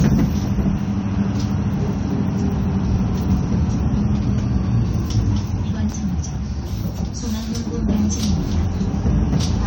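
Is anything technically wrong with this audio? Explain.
Yes, there's generation loss through the whole clip: a swirly, hollow, smeared quality with softened attacks and nothing above 19.3 kHz. It's likely been through around five rounds of AAC-LC at roughly 96 kbit/s, each pass adding its own quantisation noise and spectral holes.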